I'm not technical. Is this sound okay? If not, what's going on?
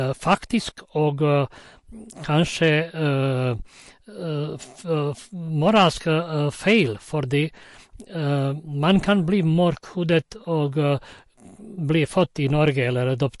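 No. The speech has two separate problems.

The first is MP3 compression, most likely from being saved at a low quality setting. Throughout the clip the encoder has discarded detail it judged unimportant, and here the damage is plainly audible. The sound has a watery, swirling quality, s sounds can come out metallic and chirpy, and word onsets are smeared. Nothing above about 11.3 kHz remains, so the crisp top end of the speech is missing entirely.

The second is hard clipping. At six moments the sound was too loud for some stage in the recording chain to handle, so the tops of the waveform were sliced flat. Each one is heard as a brief crackle or rasp on a loud moment: 0.30 to 0.34 s, 2.63 to 2.75 s, 5.67 to 5.88 s, 6.68 to 6.80 s, 10.13 to 10.17 s and 12.67 to 12.82 s. The overload is greatest at 0.30 s, followed by 5.67 s.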